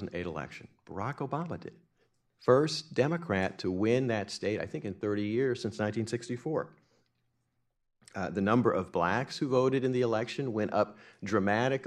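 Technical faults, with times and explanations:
No technical faults can be heard in this speech recording.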